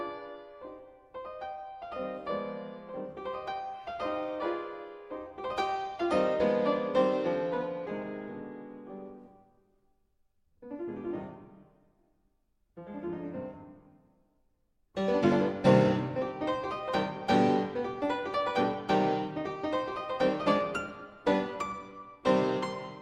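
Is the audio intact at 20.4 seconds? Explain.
Yes, at 20.4 seconds the audio plays through cleanly, with no dropout, click, distortion or other fault to be heard at that moment.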